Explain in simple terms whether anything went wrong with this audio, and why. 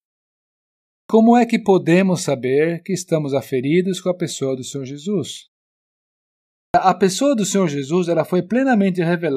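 Two phrases lose their openings, a clipped start after a pause. The playback device dozes in silence and wakes late. About 0.13 s is cut at 0.96 s before "é que podemos saber", and 0.15 s at 6.59 s before "a pessoa do".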